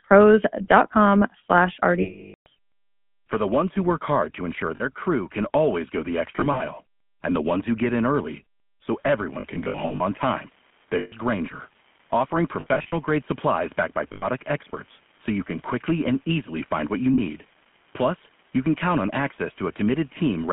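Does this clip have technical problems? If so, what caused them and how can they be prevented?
Yes. The whole clip went through the GSM full-rate codec, which models the vocal tract and drives it with a sparse, regularly spaced pulse excitation. The narrow 150 Hz to 3.4 kHz band and the coarse excitation fit the 13 kbps full-rate coder. The result is speech with no highs and a plainly audible buzzy, gravelly roughness. Prevention: carry the call over a wideband codec such as AMR-WB or EVS instead of full-rate GSM.

Lost GSM frames occur at 2.02–2.47 s, 4.76–4.83 s, 6.36–6.64 s, 9.40–10.02 s, 10.98–11.13 s, 12.60–12.93 s, 14.12–14.25 s and 17.14–17.20 s. Landmarks include just after "work hard to ensure", resuming on "crew can always go", and after "can always go the", resuming on "and the ones who". Each time, the decoder re-used the last good frame's settings, so the voice freezes into a rough metallic ring. 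The longest gap, about 440 ms at 2.02 s, dies away toward silence. The runs at 6.36 s, 9.40 s and 12.60 s are broken up into short bursts under about 70 ms each, which gives a stuttering ring. Prevention: improve radio coverage or add interleaving and channel coding margin so fewer frames arrive corrupted.

An unreliable data bit starts at 8.89 s, right after "who get in early", and continues to the end. One marginal data line flips its bit in a random share of samples, and each error adds a spike of identical size. That produces a steady crackle or fizz laid over the speech and present in the pauses too. Prevention: reseat or replace the faulty connection or converter and check signal integrity on the data lines.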